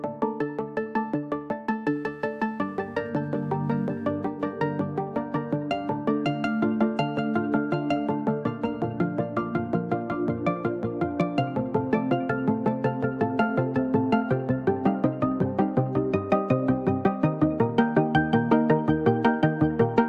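Shifting processor or graphics load disturbs the ground shared with the audio circuit, producing computer activity noise from 1.87 to 4.45 s: a faint buzzing chirp pulsing at around 150 times a second, roughly 40 dB below the sound, following the machine's activity rather than the audio.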